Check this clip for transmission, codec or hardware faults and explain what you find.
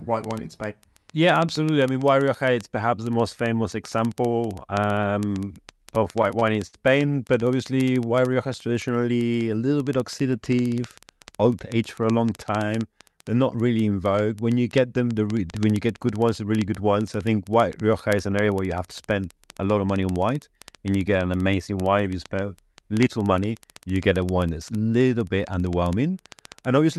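The clip is speech carried over a call path whose audio stops at about 12 kHz, consistent with Opus. It has four kinds of fault: constant clock ticks, one stutter burst, one slow-down and two speed-ups.

Word clock ticks run from 0.11 s to the end, recurring about every 70 ms. The receiving device's clock is not locked to the sender's and drifts by a few hundred ppm. At each slip one sample is dropped or repeated, which produces a sharp tick of uneven strength at a steady rate.

Repeated stalls (stutter) occur from 5.95 to 6.76 s. Packets arrived late, so the jitter buffer ran dry eight times and the receiver extended the last sound for 135 ms in total. The longest hold was 63 ms. Nothing is lost, but the speech drags and stutters.

Jitter buffer slow-down occurs from 7.74 to 8.74 s. With the buffer low, the receiver repeated pitch periods and bits of pauses, adding 104 ms to rebuild its reserve. 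Speech plays at about 90% speed at unchanged pitch, so sounds are drawn out.

Jitter buffer speed-up occurs at 10.76 to 12.11 s and 22.92 to 23.43 s. Each time the buffer held excess audio, and the receiver cut roughly 70 ms of short pitch-period pieces. Speech runs at 105% and then 111% with unchanged pitch, and the second span sounds noticeably hurried.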